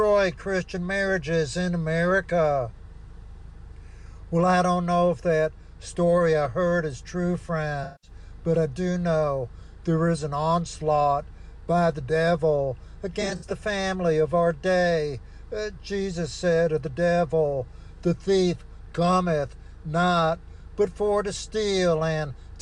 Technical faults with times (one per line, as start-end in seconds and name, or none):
7.83-8.10 AAC frame loss with concealment
13.13-13.52 AAC frame loss with concealment